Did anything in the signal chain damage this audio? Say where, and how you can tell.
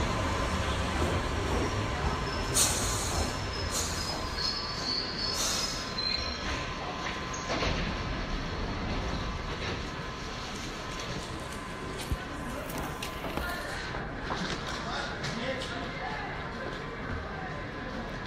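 No, nothing along the chain has audibly damaged these everyday sounds, and there is no point where a fault can be heard.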